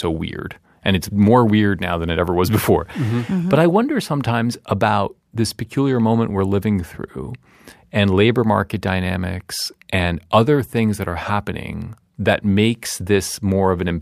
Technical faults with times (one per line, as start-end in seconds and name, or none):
none